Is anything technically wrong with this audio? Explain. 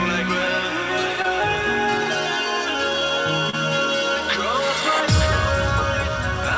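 Yes. There is short concealed packet loss at 1.22 to 1.26 s and again at 3.50 to 3.55 s. Each time about 20 ms of audio arrived too late. The receiver stretched the preceding sound across the gap, then blended back, leaving a brief smear or wobble.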